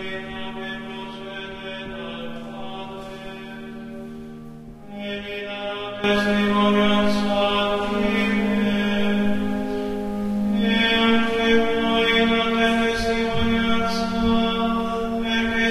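Everyday sounds, with a sudden gain jump at 6.04 s: level and background noise step up together by about 12 dB, instantly rather than swelling as automatic gain would, likely from gain applied without a ramp.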